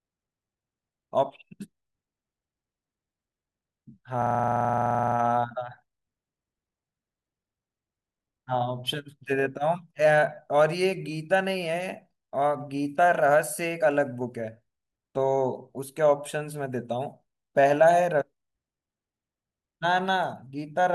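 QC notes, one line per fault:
4.22–5.16 s, system hang loop: one 43 ms slice of speech repeats exactly, about 22 times, at a steady 23.4 Hz, giving a rapid mechanical stutter, a buzzy rattle rather than a tone. The loop length fits a 2048-sample buffer, which the playback hardware kept cycling while the system froze. Each repeat is identical and there are no silent gaps, which separates it from dropout or underrun stutter. Speech resumes with essentially nothing missing.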